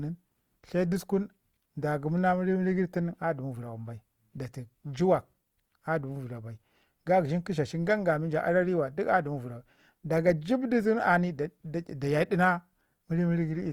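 Throughout, the speech sounds rough and grainy, with a plainly audible noisy texture. This is likely Opus compression in music mode at a rate that fits about 24 kbps. Band energies survive, but fine detail is replaced by folded spectrum or noise. Content still reaches 20.1 kHz.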